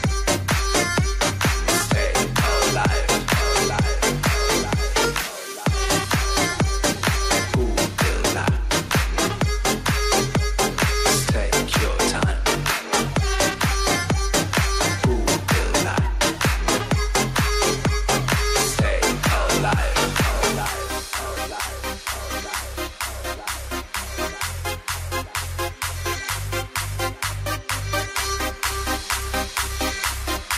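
Gain pumping runs through the whole clip, from start to finish. The level swings by roughly 5 dB. This likely comes from the gain being set far too high for the microphone, so a fast limiter or compressor keeps clamping down on every peak and releasing in the pauses. Loud and quiet passages end up squashed close together in level.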